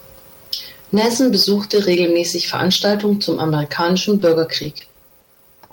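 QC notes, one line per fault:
4.19–4.23 s, short stall from a late packet: a packet arrived late, the jitter buffer ran dry, and the receiver held the last sound for about 20 ms before resuming where it left off. Nothing is lost, but the sound briefly drags, and playback sits about 20 ms later afterwards.
4.63–5.70 s, repeated packet loss (robotic sound): eight gaps in quick succession, none longer than 40 ms. Each is patched by extending the preceding sound, about 170 ms of fill in total, while about 120 ms is simply missing, giving a choppy texture.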